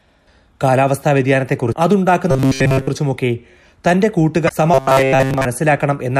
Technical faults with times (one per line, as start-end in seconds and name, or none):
1.72 damaged data in a compressed stream
2.31-2.87 robotic sound from repeated short buffers
4.45-4.50 damaged data in a compressed stream
4.74-5.45 robotic sound from repeated short buffers